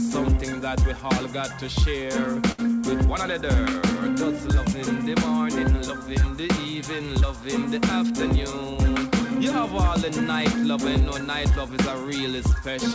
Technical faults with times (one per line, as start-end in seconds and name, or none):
2.52-2.61 short stall from a late packet